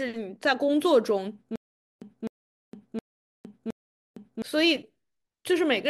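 From 1.56 s to 4.42 s the speech breaks into a stutter with silent gaps. A fragment of about 256 ms plays, then drops to dead digital silence for about 460 ms, and the same fragment returns, four times at an even period of roughly 716 ms. The likely cause is a stalled player or stream that replays its last buffered fragment on each retry before running empty. The audio due in that span never plays.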